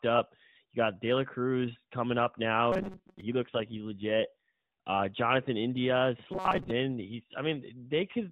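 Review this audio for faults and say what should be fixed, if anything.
Robotic sound from repeated short buffers occurs from 2.72 to 3.21 s, right after "coming up now", and again from 6.32 to 6.71 s. The speech becomes a rigid metallic buzz pinned at 188 Hz. A buzz at that pitch fits a loop of about 5.3 ms being replayed in place of most of the real audio in the first burst and about half in the second. The likely cause is late-arriving audio with concealment repeating the last buffer. A deeper jitter buffer and proper packet-loss concealment would prevent it.

An AMR rate drop runs from 3.34 to 4.50 s, where the AMR-NB stream falls from 12.2 kbps to 5.9 kbps. The band stays within 4 kHz and there is no gap. With fewer bits for the excitation pulses, the voice turns rougher and more synthetic for just over a second, then returns to the lightly coded 12.2 kbps quality. Improving radio coverage or link margin, or using AMR-WB with stronger channel protection, would prevent it.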